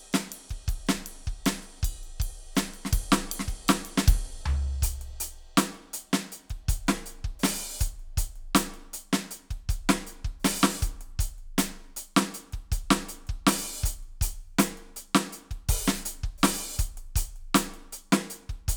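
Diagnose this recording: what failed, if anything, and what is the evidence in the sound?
Nothing failed in this music.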